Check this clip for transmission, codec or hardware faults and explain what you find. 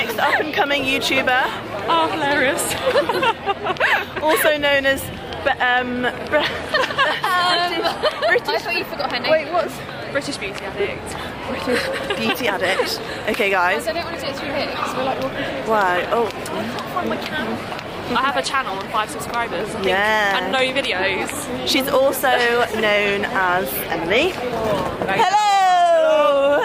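No transmission, codec or hardware faults can be heard in the clip. There is nothing here to locate or explain.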